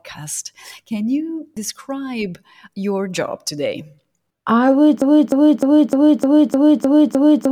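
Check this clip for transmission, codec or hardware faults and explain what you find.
A broken-record loop starts at 5.02 s and runs to the end of the speech clip. A fragment about 0.30 s long repeats exactly, back to back, eight times, so the same slice of sound stutters on with no new material after that point. The likely cause is a stall in the player, encoder or stream, which kept resending the last fragment it held; whatever should have followed 5.02 s is lost.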